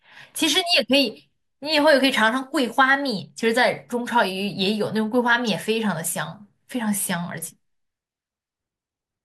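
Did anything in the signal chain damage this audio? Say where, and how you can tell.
Yes: damaged data in the compressed stream, 5.47 to 5.49 s, a brief blip where corrupted bytes made the decoder misread frames and lose sync before resuming.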